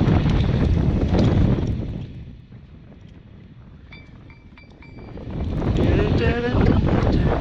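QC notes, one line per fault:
1.43–2.40 s and 4.83–5.84 s: zipper noise. The level falls by roughly 25 dB and later rises by roughly 25 dB in unsmoothed 2 dB jumps, about ten per second. Each abrupt jump leaves a small click, so a ticking zip rides on the sound throughout both moves.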